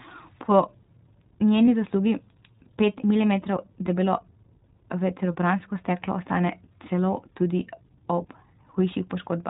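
Throughout the recording the speech carries iLBC codec coloration: nothing above 4 kHz survives, and the voice sounds slightly rough and synthetic, plainly audible. Each frame's excitation is coded independently, and the character fits 20 ms frames at around 15.2 kbps.

At 1.66 to 1.69 s a lost iLBC frame, about 20 ms of missing audio, is concealed by repeating the previous pitch cycle with added noise. It is heard as a brief held, slightly buzzy vowel, and because frames stand alone, the speech recovers almost immediately afterwards.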